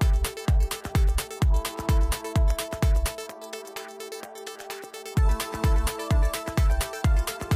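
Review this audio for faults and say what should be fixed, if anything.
A single loud pop at 2.51 to 2.53 s jumps roughly 10 dB above the sound, which carries on underneath rather than dropping out as a gap would. A sharp voltage pulse, likely from a plug, switch or static discharge, was added to the signal. Secure connections and switch equipment only while muted.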